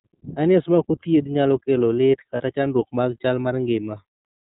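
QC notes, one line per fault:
throughout: iLBC codec, audibly rough and a bit synthetic, nothing above 4 kHz, which fits 30 ms frames at around 13 kbps coded independently.
2.37–2.41 s: lost iLBC frames, one frame's worth (30 ms) patched by repeating the last pitch cycle with noise, so a brief buzzy held vowel, then clean recovery.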